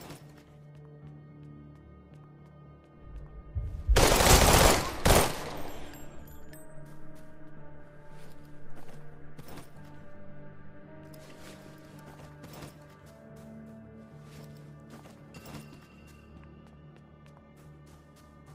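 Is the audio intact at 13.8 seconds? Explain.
Yes, at 13.8 seconds the audio is intact, with no dropout, click, distortion or other fault audible at that point.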